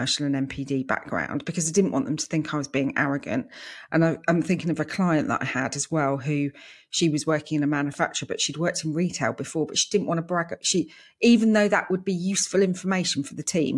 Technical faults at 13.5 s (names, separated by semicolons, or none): none